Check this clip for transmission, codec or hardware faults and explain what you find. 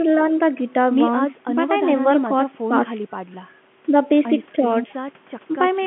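Nothing in this speech recording points to a fault. It carries the narrow sound of G.711 telephone coding, held within the line band of about 150 Hz to 3.4 kHz, with at most a faint trace of coding noise.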